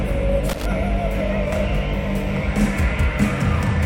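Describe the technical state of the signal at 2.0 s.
At 2.0 s the signal is intact, with no audible dropout, distortion, glitch or other fault at that moment.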